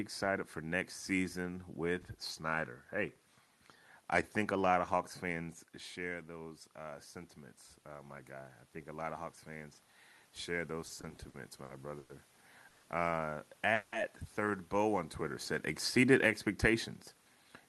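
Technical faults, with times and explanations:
6.05 to 12.3 s, automatic gain rising: after the input level drops by about 10 dB around 5.5 s, the automatic gain control lifts its gain by about 7 dB over several seconds, so the speech and the room noise behind it swell together rather than the voice alone.
10.87 to 12.12 s, repeated stalls (stutter): the jitter buffer runs dry seven times as packets arrive late, and each time the receiver stretches the last sound to fill, the longest wait being 100 ms. About 260 ms in all is filled this way, so the speech drags and stutters while nothing is lost.
12.69 to 12.86 s and 13.74 to 13.95 s, call audio freeze: the speech halts and the last sound is carried on as a fading buzz for 140 ms and then 180 ms, likely because packets were held up in transit, before resuming exactly where it stopped, so each stall adds a gap instead of losing audio.
17.36 to 17.63 s, jitter buffer speed-up: just after "said exceeded expectations" the receiver trims the built-up backlog by cutting out a few dozen milliseconds in tiny pitch-period pieces, so the speech runs about 11% faster at unchanged pitch and sounds hurried.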